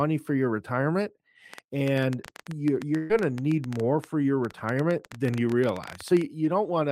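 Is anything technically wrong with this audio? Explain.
Yes, there are two faults.

From 1.5 s to 6.2 s there is a train of clicks: roughly fifty sharp ticks at about 10.9 per second, unevenly spaced and poking out around 10 dB above the speech. They are almost identical in shape and continue through the pauses, so they are clearly added on top rather than being breaks in the audio. That makes interference from nearby equipment or a faulty connection or power supply the likely cause. Dropouts or codec glitches would disturb the speech itself instead.

From 2.97 s to 3.12 s there is a burst of packet loss. About 120 ms of the speech never arrived, and the receiver filled the gap by stretching the last sound it had and letting it fade. What you hear is a brief held buzz or fading hiss, and then the speech resumes slightly further on with that stretch missing. Unlike the clicks, this replaces part of the speech rather than sitting over it. 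There is also no silent hole, because the gap is filled in.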